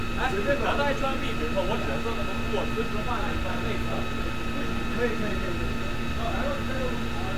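No technical faults can be heard in this recording.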